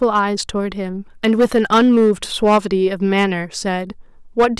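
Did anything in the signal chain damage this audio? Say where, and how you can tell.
Yes, there's hard clipping at 0.02–0.19, 1.24–2.58, 3.17–3.25 and 4.39–4.46 s. Peaks are cut flat, likely at the converter or a sample-format stage, giving crackle, with harsh fuzz through the longest stretch, which is overdriven about 8 dB.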